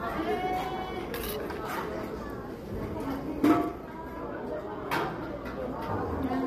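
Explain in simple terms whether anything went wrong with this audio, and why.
Low-delay AAC compression roughens the sound from start to finish, adding a grainy texture and dulling the top end, likely from the short-frame encoding used for video calls.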